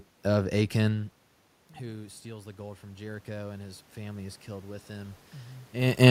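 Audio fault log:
1.79–6.06 s, automatic gain rising: from 1.79 s the voice and the room noise behind it swell together, climbing steadily for about four seconds until 6.06 s, so the background lifts in step with the talker rather than staying put. The input had dropped by about 19 dB, likely after the talker moved back from the microphone near 1 s, and the automatic gain control responded by raising its gain slowly, by about 9 dB in all, which only partly restores the level.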